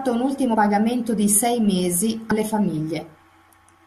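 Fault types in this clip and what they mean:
Compressed frames skipped: Whole frames of the coded audio never reach the output, because they are missing from the stream or the decoder rejected them as damaged, so playback lurches forward. It happens at 0.53 s, just before "pagamento di sei mesi", and again at 2.30 s, just after "pagamento di sei mesi". Each time about 70 ms of speech vanishes, which fits three 21.3 ms frames.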